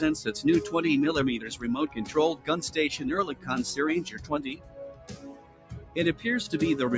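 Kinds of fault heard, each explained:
Noise suppressor applied to music or sounds: a speech-tuned suppressor stays on throughout, mistaking sustained sound for noise, so the level pumps with swings of roughly 15 dB.
Sound cut by the noise suppressor: held or fading parts get pulled down about 10 to 13 dB, at 1.88, 3.32 and 4.07 s, and longest from 4.55 to 5.96 s.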